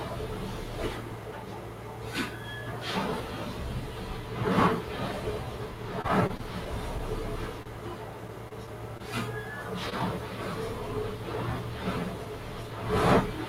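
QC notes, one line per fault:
Throughout: noise suppressor applied to music or sounds. A speech-tuned suppressor treats steady tones, ambience and decay as noise and pulls them down, then lets them back up when a new attack arrives. The level therefore breathes and pumps, swinging by about 5 dB, and sustained parts thin out. On a spectrogram the background and tails fade between onsets, and the waveform envelope shows dips after each transient.
6.01–7.01 s and 8.28–9.02 s: repeated packet loss (robotic sound). The first stretch has six gaps, about 94 ms concealed in total with 40 ms lost outright and the longest gap 25 ms. The second has four gaps, about 59 ms concealed and 40 ms lost, longest 21 ms. Each hole is bridged by looping the last sound, so the audio turns choppy. A spectrogram shows short smeared, repeated-looking patches with harmonics frozen across them, and the waveform shows small jumps in texture where real audio resumes.
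7.63–7.68 s and 9.90–9.94 s: short stall from a late packet. A packet arrived late, the jitter buffer ran dry, and the receiver stretched the previous sound for 29 ms and then 21 ms before resuming where it left off. Nothing is lost, but the sound hangs briefly with a faint buzz. On a spectrogram this appears as a thin strip of copied, flattened spectrum, and the waveform shows a slight periodic or dipped segment.
10.00–10.02 s: short concealed packet loss. About 20 ms never reached the decoder in time, and the receiver dropped that audio and jumped ahead with only a 1 ms blend, closing up the timeline. The result is a tiny skip rather than a smear. On the waveform a small discontinuity marks the splice, and the spectrogram shows a brief vertical broadband line at that point.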